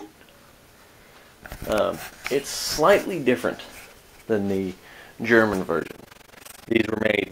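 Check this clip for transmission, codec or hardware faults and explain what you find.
One fault appears near the end. From 5.80 s to 7.32 s there is overlap-add ripple: the frames were windowed and rejoined with overlaps that don't sum evenly, so the level swings by about 60 dB once per frame, around 20 times a second. It sounds like a harsh, fast flutter. On a waveform the envelope is deeply scalloped. On a spectrogram it shows as regular vertical bands.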